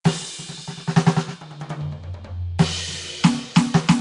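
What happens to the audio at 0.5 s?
At 0.5 s the music has a rough, hissy halo around it and a smeared, underwater quality, and nothing sounds above 10.6 kHz. The damage runs through the whole clip, not just that moment. The likely cause is Nellymoser compression: the Flash-era codec codes 256-sample blocks at a fixed two bits per sample, gives weak bands no bits and fills them with noise instead. The degree of damage fits a bitrate of about 44 kbps.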